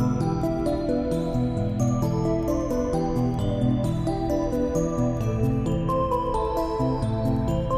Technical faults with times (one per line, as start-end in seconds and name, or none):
none